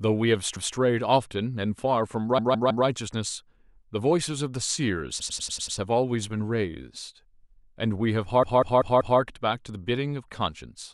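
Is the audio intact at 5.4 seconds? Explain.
No. Between about 5.20 and 5.78 s a short run of compressed frames was sent to the decoder more than once, so the same 96 ms block of speech is played six extra times. That stretch of the clip is 576 ms longer than it should be, and the block length fits a run of about three codec frames. The fault sounds like a rapid stutter of repeated frames.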